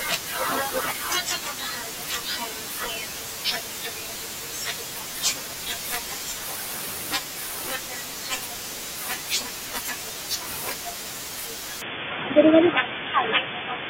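Speech that abruptly turns dull and boxy at 11.82 s and stays so to the end, with nothing above 3.5 kHz, a level shift of a few dB and a faint new noise floor. This is likely an input switched to a poorer device, not a plain low-pass filter, since the tone, level and noise all change together, with no gap at the switch.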